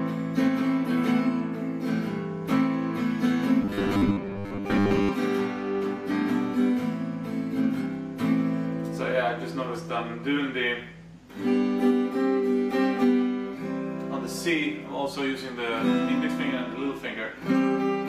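From 3.62 to 5.09 s the audio goes robotic, a rigid metallic buzz at 100 Hz from repeated short buffers. That's likely the playback running short of fresh data and looping the last 10 ms or so, with roughly half the material repeats rather than real audio.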